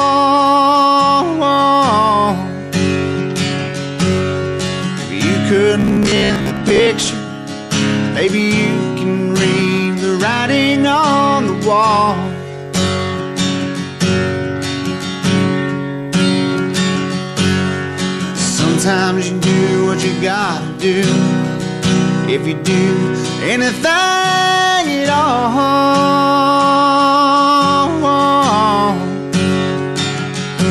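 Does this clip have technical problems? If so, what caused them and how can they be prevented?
Yes. Robotic sound from repeated short buffers runs from 5.80 to 6.87 s, where the sound turns into a rigid, metallic buzz at 66.7 Hz. That pitch corresponds to a chunk about 15 ms long being replayed over and over, with roughly half of the passage made of repeats instead of fresh audio. The likely cause is new audio arriving too slowly, so the playback side loops the last short buffer to fill the gap while the real material in between is skipped. Preventing it means giving the audio path a larger buffer and a steadier data supply, so playback never runs dry.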